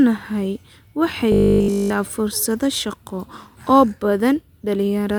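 From 1.32 to 1.90 s, incoming audio likely stopped arriving in time, so the playback side kept looping one short buffer, roughly 20 ms long, while the real signal was dropped. Across essentially that whole stretch, the result is robotic sound from repeated short buffers: a rigid, metallic 50 Hz buzz pinned at one pitch, following the speech's rough shape until normal audio resumes just before "fursado shaqo oo".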